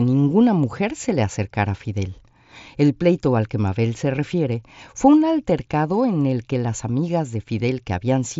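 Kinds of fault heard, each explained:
No kinds of fault are heard in this speech clip.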